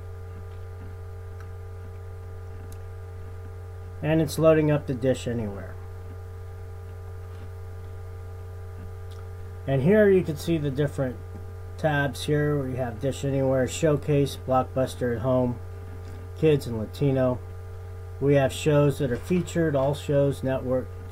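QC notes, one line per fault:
No fault found.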